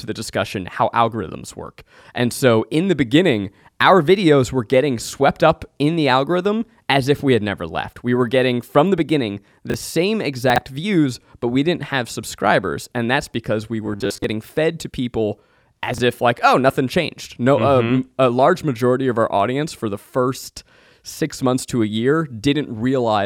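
At 9.70–9.74 s, 10.50–10.58 s and 15.94–16.00 s the speech briefly jumbles: chunks out of order. Segments of about 20 ms play one, three and two chunks late respectively, leaving hard joins where they land.

From 13.86 to 14.24 s the speech turns into a rigid metallic buzz at 100 Hz. This is robotic sound from repeated short buffers, likely caused by the software looping a 10 ms stretch while about half the real audio is skipped.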